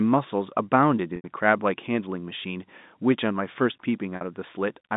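At 1.16 s and 4.16 s, packet loss with pitch repetition occurs. Gaps of 80 ms and 50 ms are bridged by a repeated pitch period, a held buzz that fades out, heard through the telephone band.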